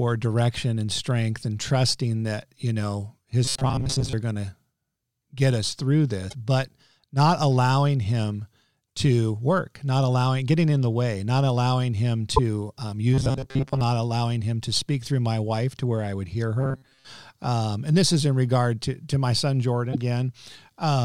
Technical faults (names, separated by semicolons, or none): robotic sound from repeated short buffers; damaged data in a compressed stream